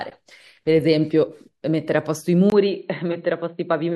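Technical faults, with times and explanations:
2.5–3.96 s: input likely switched to a poorer device. After a 20 ms gap, speech dulls, drops a few dB; spectrogram empties above 4.2 kHz.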